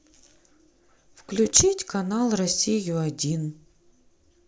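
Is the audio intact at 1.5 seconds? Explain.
No. From 1.46 to 1.61 s there is loose connector crackle: a worn or dirty contact in the signal path makes and breaks intermittently, chopping the speech, so a short, irregular burst of scratchy crackling cuts across the audio.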